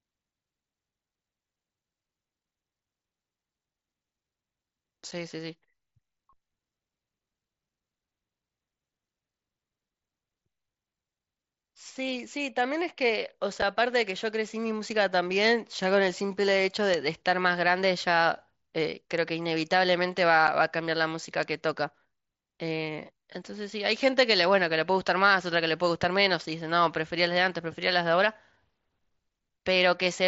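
Short holes with abrupt edges cut the speech at 5.11 s, 13.62 s and 20.47 s. This is unconcealed Bluetooth headset packet loss: each time, one 7.5 ms voice packet went missing between headset and phone and was replaced by silence or an idle pattern rather than repaired. In between, single sharp ticks spread across the whole spectrum appear at 14.92 s, 15.84 s, 16.94 s and 19.18 s, with one more at 21.43 s. These are bit error spikes, where a flipped bit makes one sample, or three in a row at 21.43 s, jump by a power of two and snap back. All of this sits on the wideband mSBC headset codec, which carries speech up to 8 kHz.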